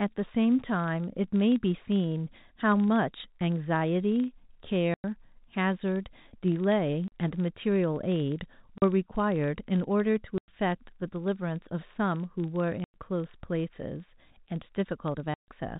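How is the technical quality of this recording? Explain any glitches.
The recording has two faults: a steady low buzz throughout, and six short dropouts where the speech cuts to dead silence. The telephone-style G.711 coding is audible only as the narrow band, with nothing above 4 kHz.

Filter restarted on every block, throughout: a filter resets its state at each block boundary, so every block starts with a small transient. These repeat at 25 Hz, which fits 40 ms blocks, and sound like a buzz that grows louder and quieter with the speech. A waveform shows evenly spaced ticks, and a spectrogram shows thin vertical lines every 40 ms.

Packet loss filled with silence, at 4.94–5.04 s, 7.08–7.12 s, 8.78–8.82 s, 10.38–10.48 s, 12.84–12.94 s and 15.34–15.48 s: missing packets were replaced with silence, giving holes of 40 to 140 ms. These are all multiples of 20 ms, which points to 20 ms packets. 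Each hole has hard edges. On a waveform the trace drops to a flat line, and on a spectrogram each hole is a blank column.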